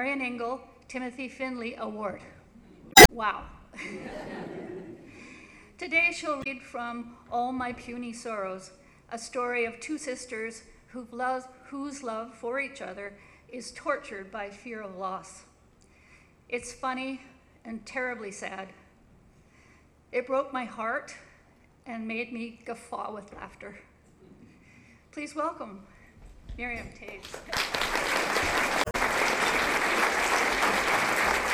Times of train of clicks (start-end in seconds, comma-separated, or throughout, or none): none